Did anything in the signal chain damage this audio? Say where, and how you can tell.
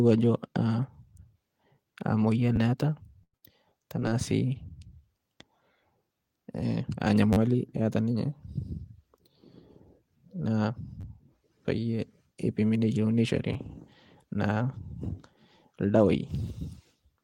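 Yes. At the driver or buffer stage there is a repeated buffer at 2.56, 7.33, 11.01 and 13.54 s. A slice of about 10.7 ms replays with hard joins, which fits a 512-sample buffer. It plays two to four extra times. The stutters land just before "eata ninye" and "payie ipimi". New audio arrived late, so the device reused the old block.

On the network, a burst of packet loss hits 3.24 to 3.35 s and again 3.37 to 3.44 s. About 100 ms and 60 ms of speech are missing. The receiver stretched the last sound and faded it down, then jumped ahead.

Also on the network, a short concealed packet loss occurs at 4.00 to 4.03 s. About 20 ms never reached the decoder. Concealment filled the hole from the preceding sound and blended back, leaving a brief smear rather than a clean gap.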